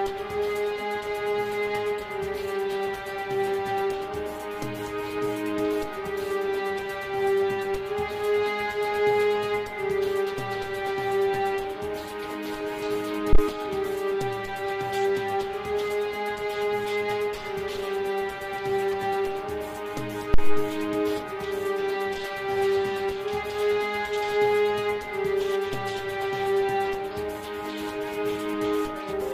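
A deep, low thump lands at 13.33 s and dies away by 13.41 s, peaking at about -8 dBFS with a quick 18 ms decay. A second thump follows at 20.34 s, ringing out to 20.73 s with a longer 88 ms tail at the same level. Both are phantom power thumps: the supply on a live input was switched, and that sudden voltage step travelled through the coupling capacitors into the audio path as a low-frequency pulse.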